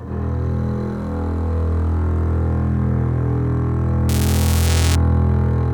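From 4.09 to 4.95 s there is buffer tearing: the writing and reading positions in the ring buffer have slipped and cross each period, so a small slice of each buffer replays audio a few milliseconds old. It sounds like a 345 Hz robotic buzz, which fits a 128-sample buffer.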